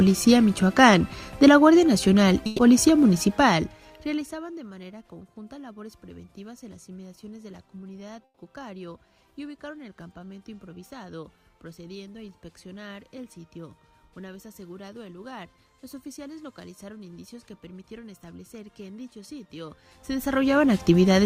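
At 2.46 s the sound freezes into a held, fading smear for about 120 ms, then picks up again slightly further along, with that stretch of audio gone. This is a burst of packet loss: several consecutive packets never arrived in time, so the receiver kept extending the last sound it had and let it decay until fresh data resumed. The same thing happens at 8.24 s, where the concealment fills about 130 ms and fades out, leaving roughly 40 ms of silence before the audio returns.

Between 3.19 and 4.64 s, a fine ticking or zipping sound rides on top of the audio as the level drops by about 25 dB, a rapid buzz of tiny clicks at a couple of hundred per second. This is zipper noise. The gain moved in abrupt increments, each applied without interpolation, so every step left a small discontinuity in the waveform.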